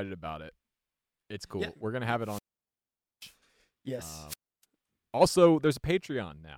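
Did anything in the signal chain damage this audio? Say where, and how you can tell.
Yes. The damage happens at the radio link of a wireless microphone, ahead of any digital stage. There are two wireless microphone squelch dropouts. The first runs from 2.21 to 3.34 s, just after "gonna have", with about 0.84 s of muting. The second runs from 4.27 to 4.64 s, with about 0.30 s muted. Each time the FM signal weakens and hiss swells. The receiver's squelch then shuts the output into near silence before the speech returns. That hiss-then-hole pattern separates it from network packet loss, which leaves clean gaps or smeared, repeated fragments.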